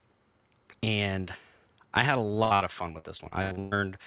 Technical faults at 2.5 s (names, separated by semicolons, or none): repeated packet loss (robotic sound)